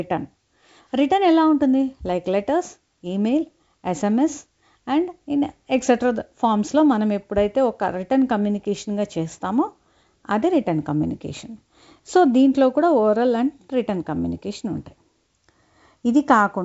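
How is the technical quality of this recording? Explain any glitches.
No glitches can be heard anywhere in the recording. The speech has the wideband telephone character of G.722 coding, with nothing above 7.7 kHz and at most a faint trace of coding hiss.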